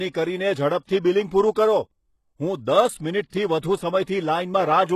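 Across the speech, s sounds are gritty and metallic, likely from HE-AAC compression at a very low bitrate. A spectrogram shows blocky, copied treble stopping sharply at 12.3 kHz.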